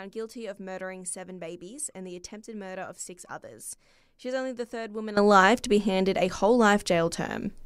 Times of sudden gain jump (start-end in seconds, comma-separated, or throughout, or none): 5.17-7.65